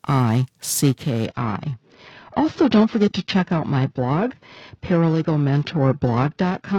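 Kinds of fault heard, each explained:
Periodic clock jitter: the converter's sampling clock is being wobbled at a steady rate, here somewhere around 1 kHz, so every component of the speech picks up sidebands spaced roughly 1 kHz above and below it. Higher-frequency content is affected more, giving the voice a rough, metallic edge that rides on the sound throughout the clip and disappears whenever the speech pauses into silence.
Adaptive stream at a lower bitrate: from 1.26 s to the end the stream switches to a much lower-bitrate AAC version, which fits a drop from about 96 kbit/s to about 16 kbit/s. The change is abrupt and without a gap: the top end is gone above 5.1 kHz, sibilants lose their crispness, and the speech takes on a duller, more smeared codec character for the rest of the clip.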